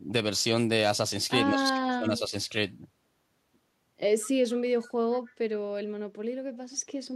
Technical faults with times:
1.49-2.34 speech suppressed in double talk
4.82-4.91 echo leak
6.73-6.82 echo leak

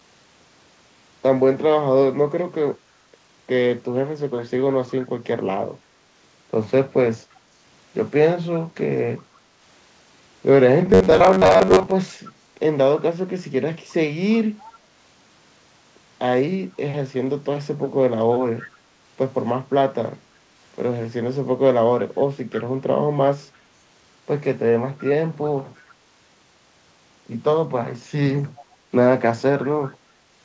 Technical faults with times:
7.34-7.40 echo leak
10.89-11.93 robotic sound from repeated short buffers
12.27-12.31 echo leak
14.61-14.79 echo leak
22.52-22.62 echo leak
25.88-25.92 echo leak
28.56-28.76 echo leak

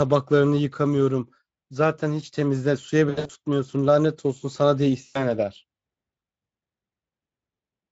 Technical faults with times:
3.09-3.31 VoIP packet loss concealed by the speech codec
5.05-5.31 VoIP packet loss concealed by the speech codec

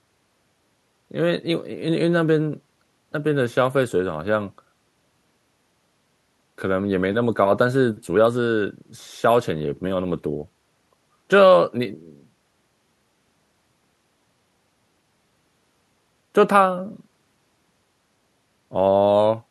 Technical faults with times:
none

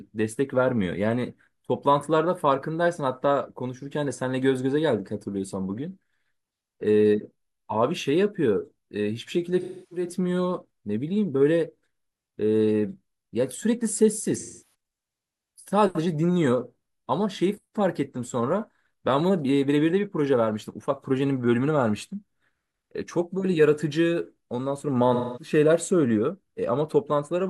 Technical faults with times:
9.61-10.06 AAC frame loss with concealment
14.37-14.63 AAC frame loss with concealment
25.14-25.51 AAC frame loss with concealment

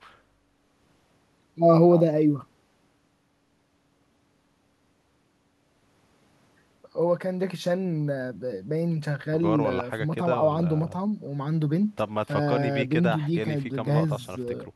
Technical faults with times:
none

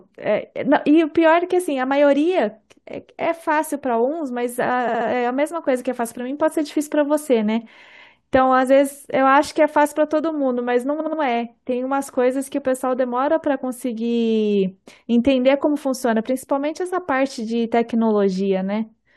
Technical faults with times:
4.87-5.06 repeated frames
10.99-11.19 repeated frames
15.99-16.01 repeated frames

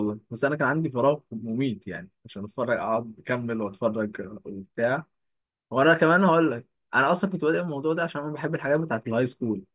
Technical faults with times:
none

